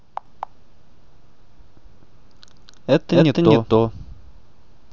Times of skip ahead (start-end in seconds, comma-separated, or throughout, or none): none